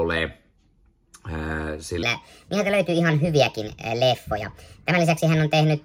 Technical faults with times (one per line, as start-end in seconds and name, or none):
2.03-5.85 wrong sample rate